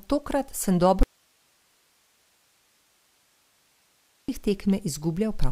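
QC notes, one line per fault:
1.03–4.29 s: audio dropout to a faint residue; speech cuts out abruptly, leaving only hiss some 40 dB down, likely a broken feed into a still-live input.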